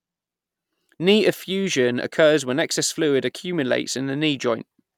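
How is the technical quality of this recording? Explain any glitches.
No audible glitches or faults.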